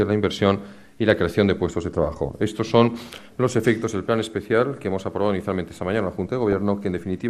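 Throughout, the audio is squeezed into a tight bit budget, likely by MP2 compression at a rate that fits about 80 kbps. Upper sub-bands are starved or switched off and the remainder coarsely quantised, giving a plainly audible dull, gurgling, granular texture.

At 6.52 s there is a brief burst of DAB burbling. Bit errors, on the order of a tenth of a percent, slip past the error correction into the compressed audio data and corrupt samples across several frames. Short blips of noise appear in single sub-bands.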